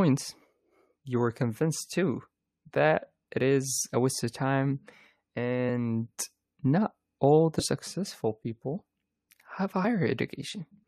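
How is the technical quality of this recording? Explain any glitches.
The recording has two brief dropouts where the speech jumps forward. From 7.54 to 7.64 s, and again at 9.83 s, a little of the speech is simply gone: about 20 ms at the first spot and roughly a tenth of a second at the second. These are compressed frames skipped. Whole blocks of the encoded audio were missing or rejected as damaged by the decoder, so playback leapt ahead.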